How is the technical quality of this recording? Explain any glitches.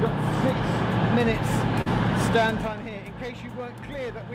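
The recording has one glitch.

Short concealed packet loss occurs from 1.81 to 1.88 s. About 40 ms of audio never arrived in time, and the receiver filled the gap by extending the preceding sound, then blended back. It is heard as a brief smear or wobble. On a spectrogram it shows as a short stretch of repeated, blurred texture.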